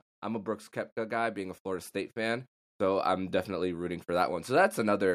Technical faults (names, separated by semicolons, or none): automatic gain rising